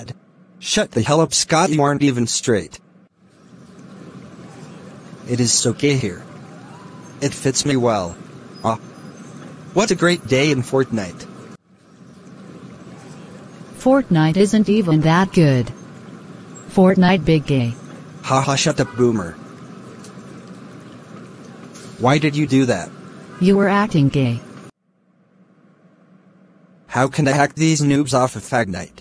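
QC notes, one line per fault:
No technical faults can be heard anywhere in the signal.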